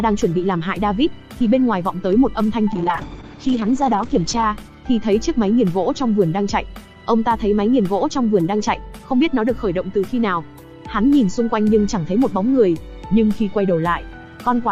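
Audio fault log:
2.72–4.63 s, call bitrate drop: the encoder was starved of bits, so everything goes coarse and watery, and the top end collapses from 20 kHz to 8 kHz for about 1.75 s, which fits the rate sliding from roughly 48 kbps to around 9 kbps.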